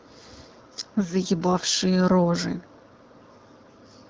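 The speech comes through an AMR wideband (HD Voice) codec at 12.65 kbit/s that is working as designed, leaving only the light coding character expected at that rate, and there are no technical faults.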